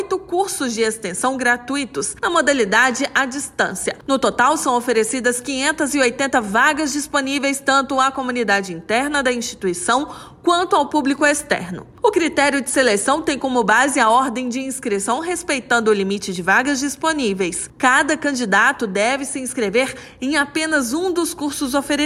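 No technical faults can be heard anywhere in the clip.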